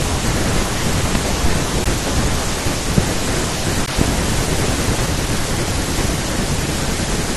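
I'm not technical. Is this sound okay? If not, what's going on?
No. Three loud pops, sharp clicks sitting on top of the speech, land at 1.15 s, 2.98 s and 4.01 s, likely caused by electrical glitches such as a switch or static.

A gap between stream segments occurs at 1.84 s and 3.86 s: brief 14 ms silent holes where consecutive one-second pieces of the audio stream failed to join.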